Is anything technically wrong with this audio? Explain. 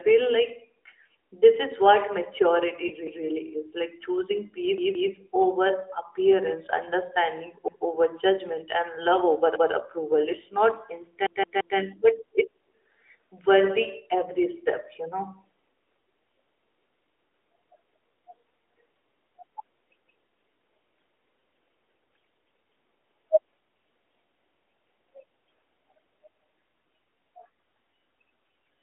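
Yes. The AMR narrowband mobile codec at 12.2 kbps confines the speech to about 300 Hz to 3.5 kHz, and two kinds of fault occur.

Lost AMR speech frames at 2.88–2.93 s, just after "this is what maturity", and again at 21.40 s. Each time, a single 20 ms frame was lost and the decoder extrapolated from the previous good frame, producing a brief dip or warble.

Repeated buffer at 4.78–5.12 s (two extra plays, just before "over appearance understanding"), 7.68–7.85 s (one extra play, just after "over appearance understanding") and 11.26–11.78 s (three extra plays). Each repeat is a 171 ms chunk, which fits an 8192-sample buffer. Audio arrived late, so the device replayed the same chunk, giving a stutter with hard joins. Nothing is skipped; the sound is only delayed.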